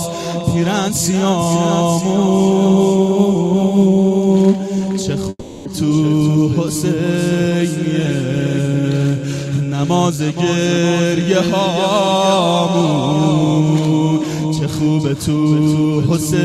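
At 5.29 s the audio breaks off and the last sound carries on as a fading buzz or hiss for about 360 ms, then roughly 30 ms of silence until 5.68 s. That content never returns, likely a long network dropout. On a spectrogram the final spectrum smears horizontally and fades, and the waveform thins to a flat line.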